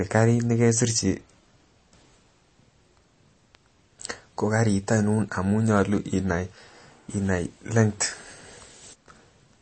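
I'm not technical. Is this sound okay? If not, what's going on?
No. MP3 compression damage runs through the whole speech clip. It is likely from squeezing the file too hard, so the encoder dropped everything above 8.3 kHz and left faint detail flickering in and out. The result is dull, plainly watery speech with smeared, swishy s sounds.

A bit error spike occurs at 3.55 s. One tiny piece of the digital data got flipped, so the signal jumped sharply for an instant and snapped back. It is heard as a single sharp tick.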